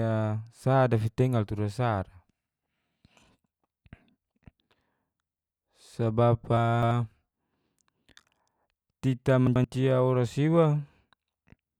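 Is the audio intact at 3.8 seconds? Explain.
Yes, the audio is intact at 3.8 seconds, with no audible fault at that point in the speech.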